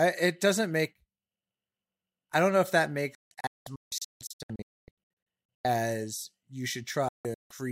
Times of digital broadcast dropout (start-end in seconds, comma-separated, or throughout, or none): 3.15-5.65, 7.08-7.51